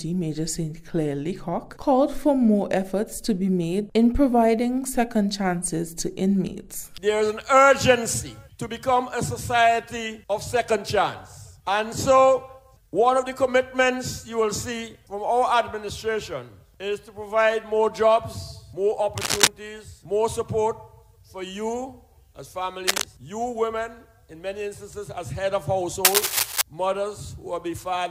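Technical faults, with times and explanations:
19.17–19.47 s, 22.87–23.06 s and 26.05–26.62 s, cable scratch noise: three short bursts of scratchy, rustling crackle sit over the sound, each about as loud as the sound itself, the last lasting roughly 0.6 s. This is likely a worn lead or connector being disturbed, its contact resistance jumping erratically. On a waveform each burst appears as dense, jagged spikes; a spectrogram shows ragged broadband smears with uneven vertical streaks.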